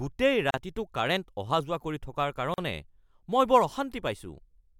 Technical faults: gap at a join of encoded pieces

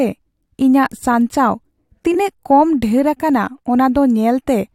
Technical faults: frames out of order

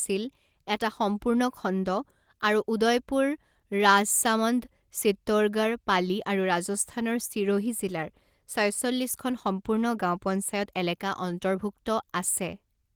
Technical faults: none

